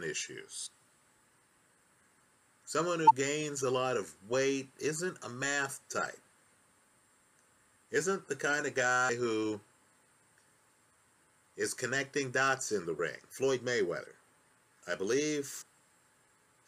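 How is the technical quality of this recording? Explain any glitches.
The recording has compressed frames skipped, a recurring dropout heard at 0.65–0.68, 3.07–3.11, 4.32, 9.08, 12.98 and 15.61–15.63 s. At each point whole compressed frames never reach the output, so the audio jumps ahead by roughly 20 to 100 ms. A waveform shows an abrupt envelope discontinuity, and a spectrogram shows a thin vertical seam where the patterns fail to line up.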